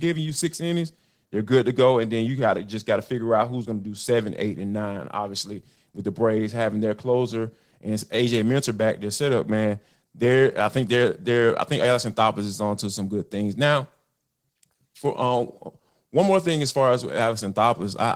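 Right through the speech there's Opus voice compression, and the codec damage is plainly audible. It sounds like hybrid coding, a linear-prediction layer below 8 kHz with a transform layer above, with the excitation coded coarsely, which fits a rate around 16 kbps.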